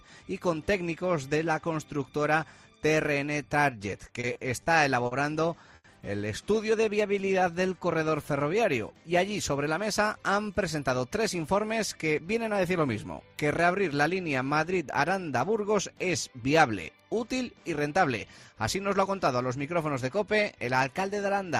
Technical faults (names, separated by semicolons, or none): repeated stalls (stutter); short stall from a late packet; jitter buffer slow-down; jitter buffer speed-up